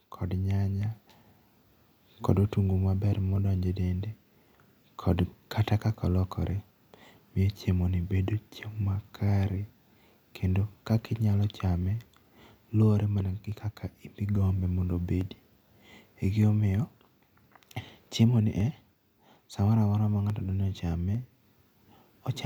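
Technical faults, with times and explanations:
0.82 to 22.0 s, clock drift buffer slips: a click or tick recurs every 0.85 s through the speech, around thirty in all. The likely cause is two devices running on separate clocks that disagree by roughly 0.1 percent, so the buffer between them creeps toward empty or full until a short block of samples, on the order of thirty, is dropped or repeated. Each jump breaks the waveform's continuity, which is what makes the click.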